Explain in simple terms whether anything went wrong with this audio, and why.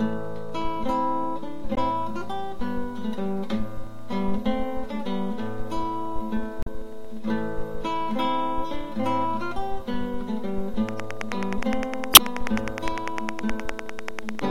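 Two kinds of fault can be heard.

Damaged data in a compressed stream causes short glitches at 1.74 to 1.78 s, 6.63 to 6.68 s and 12.12 to 12.19 s. Part of the stored sound was corrupted. The player stumbled, lost its place, then found the next good piece.

A train of clicks runs from 10.89 to 14.40 s. That is about forty sharp ticks, close to ten per second, evenly spaced and loud over the sound. The likely cause is electrical interference or a faulty connection or power supply.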